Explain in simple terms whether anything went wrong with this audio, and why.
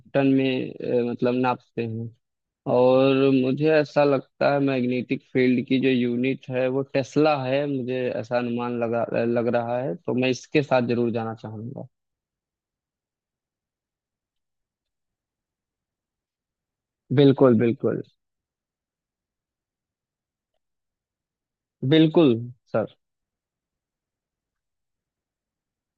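A single sharp click sounds at 22.24 s. The likely cause is dropped samples: about one tiny slice of the sound went missing, so the sound wave jumps abruptly.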